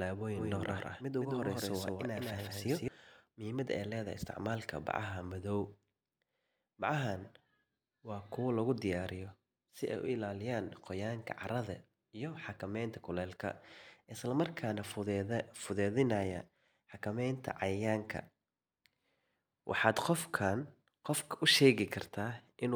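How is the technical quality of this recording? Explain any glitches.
The recording has one glitch near the start. From 0.36 to 2.88 s there's a doubled audio track: the speech is likely captured a second time through a slower path, so a full-band copy trails by roughly 150 ms, about 5 dB quieter, with no decay or room colour, and it cuts in and out abruptly.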